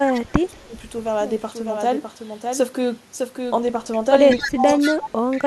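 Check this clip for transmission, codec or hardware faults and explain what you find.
Two faults are present: the talker's speech is suppressed in double talk in three places, and echo leaks back in five.

Speech suppressed in double talk occurs from 0.0 to 0.72 s, 4.33 to 4.64 s and 4.91 to 5.11 s. The voice sinks by about 20 to 25 dB at its deepest. The likely cause is an echo canceller that, with both ends talking, mistook this voice for loudspeaker echo and attenuated it.

Echo leak appears at 0.11 to 0.21 s, 3.93 s, 4.29 to 4.5 s, 4.66 to 5.1 s and 5.3 to 5.46 s. A copy of the voice trails it by 184 ms, about 10 to 30 dB below the speech, loudest after 4.29 s. This is likely a far-end loudspeaker's output reaching its microphone and not being fully cancelled. The fixed delay distinguishes it from room reverberation, which decays smoothly and starts immediately.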